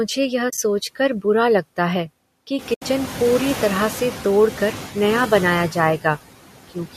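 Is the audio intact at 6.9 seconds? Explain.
No. From 6.7 seconds to the end of the clip, the noise suppressor cuts speech. It misreads the trailing low-level speech energy as steady background and attenuates it with the noise, by about 16 dB at the deepest point. Roughly 150 ms of that final stretch is affected, so the closing sounds come out swallowed and faint rather than cleanly finished.

The same processing also leaves noise suppressor artifacts at this moment, as it does across the whole clip. The suppressor pulls the bands it judges to be stationary noise down by about 17 dB, frame by frame. The residual noise floor therefore dips in gaps and comes back up under the speech.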